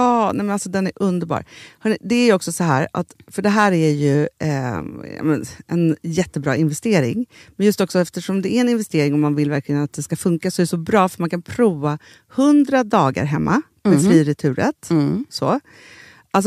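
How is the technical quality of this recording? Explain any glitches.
Two brief episodes of hard clipping occur in this speech recording, at 2.71 s and from 3.58 to 3.66 s. In both, the signal peaks exceed what a stage in the chain can pass, so the waveform tops are cut flat. The first overload is about 1 dB and lasts only an instant. The second is about 2 dB and runs for roughly 80 ms. The flattened peaks add high harmonics, heard as a short crackle on the loudest moments.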